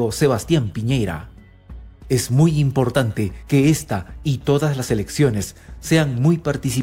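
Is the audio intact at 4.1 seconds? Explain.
Yes, the audio is intact at 4.1 seconds, with no dropout, glitch or other fault audible at that moment.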